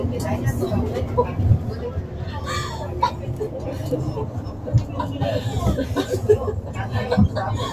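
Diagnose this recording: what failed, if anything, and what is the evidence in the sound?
A noise suppressor applied to these sounds failed at the call-processing stage. It acts throughout. Onsets come through, but sustained parts and decaying tails sink by around 5 dB. The sound pumps, flutters or thins out. The suppressor treats steady tones and ambience as noise and pulls them down.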